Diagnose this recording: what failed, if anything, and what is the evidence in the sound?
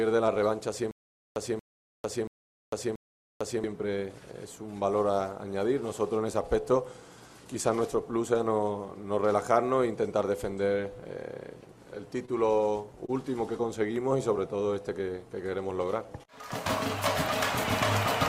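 Stutter with silent gaps, 0.91 to 3.64 s: a 231 ms burst of sound repeats four times, each followed by about 450 ms of dead digital silence, a steady 682 ms cycle. This is likely a stalled player or stream replaying its last fragment at each retry, so the intervening audio is lost.

Repeated stalls (stutter), 12.25 to 13.10 s: four brief holds, the longest 30 ms, together about 70 ms. At the network or jitter-buffer stage, late packets left the receiver empty, and it extended the preceding sound each time. Nothing is missing, but the passage drags unevenly.

Jitter buffer slow-down, 13.61 to 16.26 s: the sound runs at 95% speed with unchanged pitch, stretched by about 153 ms in total. The receiver was building up its buffer by repeating single pitch periods and pause fragments, which draws out the sound.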